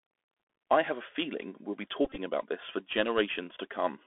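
From the start, the speech is carried by the Bluetooth CVSD headset codec, consistent with a 64 kbps link. Its one-bit delta coder cannot track fast steep changes, so sibilants turn scratchy and a granular hiss sits beneath everything. On a spectrogram, energy is confined to roughly 250 Hz to 3.5 kHz, with nothing visible above.

Between 2.05 and 2.18 s, Bluetooth headset packet repetition appears as the chip replays stale packet bits in place of lost ones. About 67.5 ms of audio is lost across that 127.5 ms stretch, which fits around eighteen dropped packets. The repeats produce a buzzy texture near 267 Hz, with runs up to about 20 ms. In the waveform this shows as short, identically repeating segments, and on the spectrogram as evenly spaced harmonic striping.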